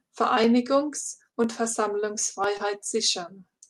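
Speech, carried over a call path whose Opus coding keeps content up to about 12 kHz. From 0.44 s to 3.44 s there is a click about once every second, roughly four in all. The spacing is steady. That regularity points to clock drift buffer slips as the likely cause. Two devices are running at slightly different rates, off by several hundred parts per million. The buffer between them drifts until a few dozen samples are dropped or repeated. Each slip leaves a click. There are also two short concealed packet losses. The first runs from 1.31 s to 1.35 s. The second runs from 2.57 s to 2.61 s. Each time, about 20 ms of audio failed to arrive. The receiver filled the gap by extending the preceding sound, for 17 ms and then 22 ms, and faded back into the real signal. Both spots sound like a brief smear or wobble in the speech.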